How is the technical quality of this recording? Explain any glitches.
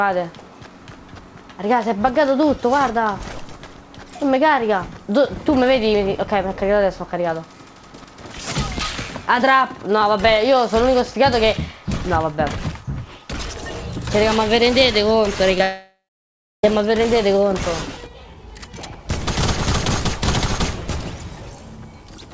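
The recording has one cluster of network glitches near the 15-second mark. The audio stops at 8 kHz, which fits a wideband call codec such as G.722.

At 15.52 s and again from 15.58 to 15.60 s there is short concealed packet loss. About 10 ms of audio went missing each time. The receiver patched each gap by extending the preceding sound, leaving a brief smear or wobble.

From 15.62 to 16.64 s comes what is likely a long network dropout. The last sound is stretched into a fading buzz or hiss, then about 0.66 s of silence follows before the audio resumes.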